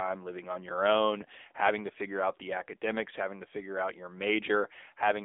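Speech passed throughout through the AMR narrowband mobile codec at a low bit mode, which sounds like roughly 8 kbps: a telephone band of about 300 Hz to 3.6 kHz, nothing above 3.7 kHz, and plainly audible buzzy, synthetic coding damage on the voice.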